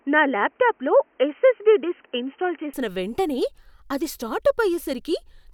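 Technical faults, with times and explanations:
0.0 to 2.74 s, input switched to a poorer device: for the opening stretch the speech is dull and boxy, with nothing above about 3.1 kHz, plus a faint extra hiss sitting well under the speech. Then, right before "వెంటనే అది", it opens up to full bandwidth with no gap and no real jump in level. That pattern likely means the recording began on a narrower-band mic or headset profile and then switched to a better input.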